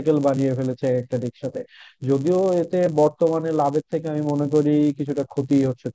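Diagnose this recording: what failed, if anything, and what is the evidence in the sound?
Resampler restarted on every block, throughout the speech: a steady buzz at 100 Hz rides under the signal. The sample-rate conversion stage, 48 kHz to 16 kHz, treats each 10 ms block separately, so every block edge carries a small error that repeats at the block rate.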